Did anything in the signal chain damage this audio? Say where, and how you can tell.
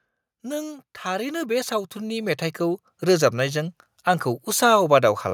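Yes, automatic gain rising in the call processing stage: from 0.41 s to 4.08 s the level climbs by about 12 dB as the AGC slowly raises its gain on a quiet input. The background noise swells along with the speech, which rules out a talker simply getting louder.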